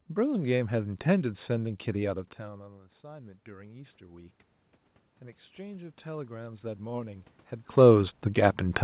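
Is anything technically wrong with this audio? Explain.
Yes. Automatic gain rising occurs from 2.06 to 4.41 s and again from 5.56 to 7.35 s. After the input drops by about 20 dB, the gain control slowly climbs about 6 dB, then about 5 dB. Unlike a talker simply moving closer, the room noise swells along with the voice.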